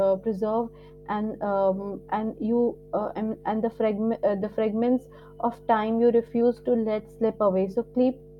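Mains hum runs from the first instant to the end, a steady 50 Hz tone sitting about 20 dB below the speech. A ground loop or nearby transformer is letting the power line leak into the signal path. On a spectrogram it appears as an unbroken horizontal line at 50 Hz, with fainter parallel lines at low multiples above it, visible even where the speech drops to silence.

Clock drift between sender and receiver is present throughout as well, with the sending side's clock running roughly 4 percent fast. Because samples arrive a little quicker than the receiver plays them out, its jitter buffer keeps creeping toward full and must be trimmed to avoid overflowing. The drift itself has no single audible moment. It shows up only through the corrections it forces, which a listener hears as a restless, slightly hurried timing across the whole passage.

Repeated timing corrections begin at about 0.17 s and continue until about 8.29 s, playing the material at an effective 104 percent speed. 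To stay in step with the fast sender, the receiver keeps discarding short slices of audio, always removing rather than repeating, at irregular spacing. Each cut is small, so the result is faint hiccups and an uneven, slightly rushed tempo. On a waveform these appear as scattered tiny discontinuities where the envelope jumps slightly, unevenly spaced along the timeline.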